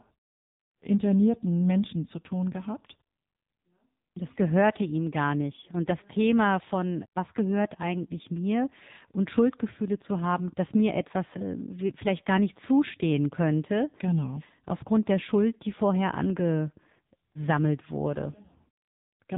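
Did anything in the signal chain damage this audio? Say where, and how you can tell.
Yes, at the codec stage, for the whole clip: this is speech passed through the AMR narrowband mobile codec, AMR-NB. Nothing above 3.8 kHz survives, so the top of the speech band is cut off throughout. The voice sounds heavily damaged, buzzy and synthetic, which fits one of the low AMR modes, around 6.7 kbps. At that rate, a vocal-tract model excited by a few pulses per 5 ms subframe leaves little detail.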